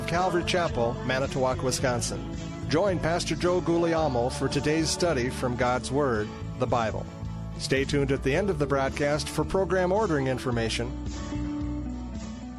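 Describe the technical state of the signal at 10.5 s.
At 10.5 s the signal is intact, with no dropout, distortion, clipping or other fault audible at that point.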